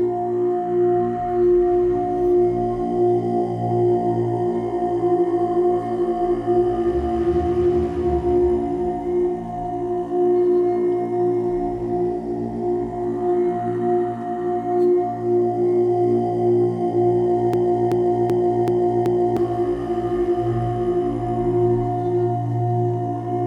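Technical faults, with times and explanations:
17.54–19.37 s, broken-record loop: a 0.38 s fragment repeats exactly five times back to back, and the audio meant for that span is lost. The likely cause is a stalled player or stream resending its last buffer. Unlike echo, the repeats are identical and don't decay.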